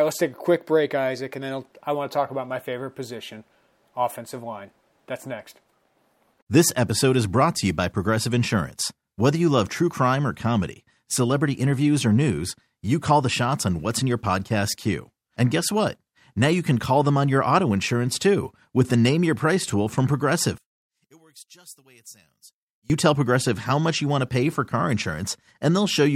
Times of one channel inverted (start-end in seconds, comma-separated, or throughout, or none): 20.58-22.90